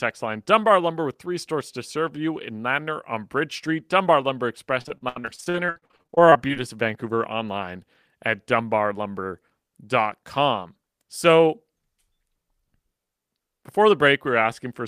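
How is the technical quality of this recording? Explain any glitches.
The recording has one clear glitch. From 4.81 to 6.58 s, repeated packet loss (robotic sound) chops the speech into fragments with pieces missing. Holes up to 73 ms were patched by stretching the preceding sound, covering about a third of the stretch. A spectrogram shows smeared, repeated frames between abrupt gaps.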